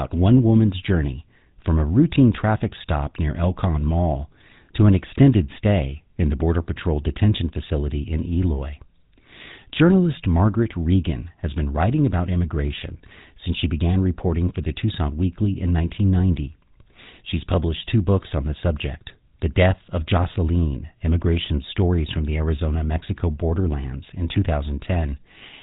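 GSM full-rate codec damage runs throughout the speech, giving a buzzy, gravelly roughness from pulse-driven vocal-tract modelling at what sounds like 13 kbps, with nothing above 3.8 kHz.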